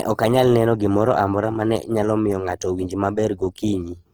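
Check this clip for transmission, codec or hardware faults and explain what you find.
One codec fault runs through the whole clip. Opus compression throughout: the speech sounds rough and grainy, likely from CELT-mode coding around 16 kbps. Its spectrogram shows noise-filled bands, few holes, extending to about 20.4 kHz.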